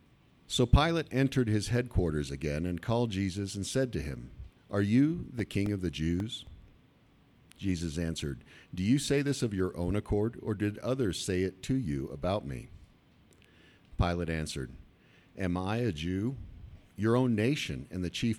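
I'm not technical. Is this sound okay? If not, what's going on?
No. CD scratch ticks at 5.12–6.74 s and 12.09–13.44 s: a disc blemish makes the player patch tiny gaps once per turn, causing quick, regular clicks.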